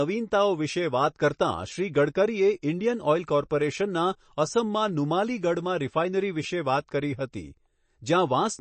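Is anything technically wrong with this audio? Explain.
Yes: throughout the speech nothing sits above 8.3 kHz, and it sounds watery and swirly, likely MP3 compression at a low bitrate around 32 kbps, cutting the treble and dropping weak detail.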